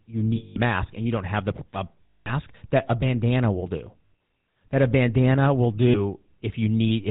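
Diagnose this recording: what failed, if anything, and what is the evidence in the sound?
The speech has a buzzy, gravelly roughness throughout and nothing above 4 kHz, so it sounds dull and grainy. The failure is at the codec stage: the GSM full-rate codec, at a rate that fits its usual 13 kbps, is plainly audible. It models the vocal tract and drives that model with a sparse, regularly spaced pulse excitation, keeping only every third sample. That coarse excitation is the source of the grit.

Four brief stretches hold a rough, metallic ring instead of moving on: 0.36 to 0.57 s, 2.06 to 2.34 s, 4.06 to 4.13 s and 5.88 to 6.0 s. These are lost GSM frames, a network-stage fault. The decoder hides each gap by repeating the last good frame's settings, which produces the frozen, ringing tone. The two longer gaps are about 200 ms each, consistent with roughly ten 20 ms frames. The two shorter ones are about 60 ms.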